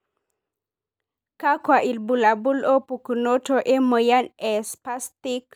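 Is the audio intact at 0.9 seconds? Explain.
Yes, the audio is intact at 0.9 seconds, with no audible fault at that point in the speech.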